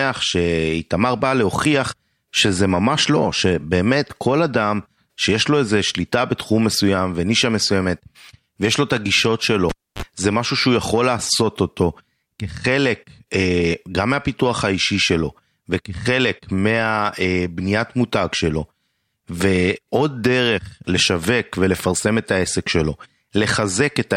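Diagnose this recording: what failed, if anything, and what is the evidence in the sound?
The failure is in the analogue wiring: a cable pulled and plugged in while live. At 9.69 s a pop cuts the speech to near silence for 280 ms. As the plug goes back, a 39 ms burst of 50 Hz mains buzz sounds while only the tip makes contact, and a second pop at 10.02 s brings the signal back. A digital dropout would fall silent cleanly, with no pops or hum at either edge.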